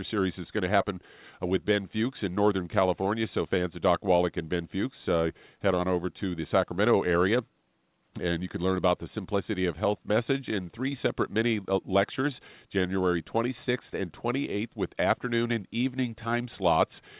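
Speech heard over a call path with nothing in the audio above 4 kHz, consistent with a G.711 mu-law narrowband link, and no faults present.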